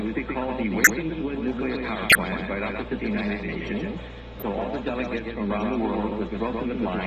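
Doubled audio track, throughout: a second full-band copy of the sound trails the original by around 150 ms, roughly 5 dB quieter. It has no decay or room colour, so it reads as a dry, flat repeat rather than an echo, lending every onset a stuttered double attack. This is likely the result of the same signal being captured again over a slower path, or an edit leaving two copies out of step.

Corrupt frame decoded, at 0.84 to 0.90 s, 2.07 to 2.16 s and 4.40 to 4.43 s: in each case damaged compressed data was played anyway. Misread gains and codes put energy at the wrong frequencies for the span of the affected frames. The result is a brief artificial chirp, squeak, blip or noise burst. The first two span several frames each. The third is shorter and much lower in level.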